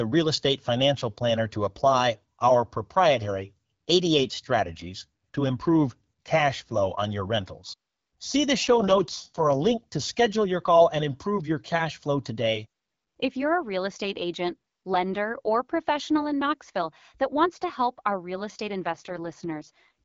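A speech recording carried over an AMR wideband (HD Voice) link. It has two AMR rate drops, from 8.63 to 9.92 s and from 18.82 to 19.91 s. In each, the voice turns rough and raspy, then recovers. The bandwidth stays the same and there is no gap. The sound fits the codec stepping down from 12.65 to 6.6 kbit/s, with the freed bits going to error protection on a weak radio link.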